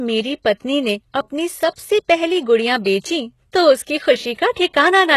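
Throughout the speech, the coding likely comes from HE-AAC compression at a very low bitrate, which fits about 16 kbps, with treble rebuilt by copying lower bands upward. The result is plainly audible: s sounds turn gritty and metallic, and nothing sounds above 12.4 kHz.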